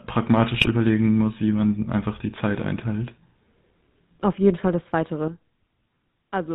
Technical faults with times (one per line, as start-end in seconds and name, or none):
0.00-6.55 GSM full-rate codec
0.54-0.69 GSM bit errors
5.28-6.55 sudden gain jump